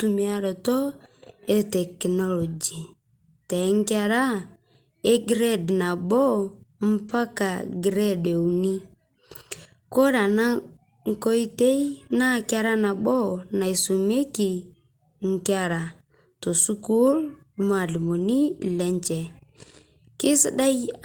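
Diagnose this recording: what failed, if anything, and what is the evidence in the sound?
Packets were lost on the network, and the Opus decoder rebuilt each one from the low-bitrate copy carried in the following packet. That lost packet rebuilt from error correction leaves no gap in the speech. Instead, short stretches sound rougher and noisier than their surroundings at 3.61 s, 7.09 s and 17.93 s (one 20 ms packet each), and over 13.13 to 13.19 s, where two separate packets are rebuilt, 40 ms in all.

At 7.07 to 7.11 s there is also a short concealed packet loss, again at the network stage. About 20 ms of audio did not reach the decoder in time. The decoder extended the preceding sound for about 14 ms, as continued pitch or shaped noise, and then blended into the error-correction copy that follows. The result is a brief smear or wobble.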